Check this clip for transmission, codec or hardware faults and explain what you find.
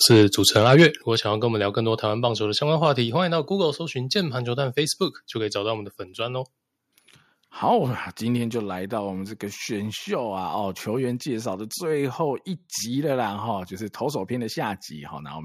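Two hardware-side faults appear in this speech clip, both near its start.

From 0.05 to 0.86 s there is microphone overload: peaks land about 5 dB past the converter's ceiling, likely from an input set too hot, so a few percent of samples are flattened. The loudest syllables gain a harsh, crackling edge tied to level, unlike codec distortion, which smears quieter passages too.

At 1.02 s the microphone volume is stepped down by about 6 dB, likely the call software reacting to that clipping. Voice and background drop together in one instant step rather than a gradual automatic-gain ramp, and the distortion is gone afterwards.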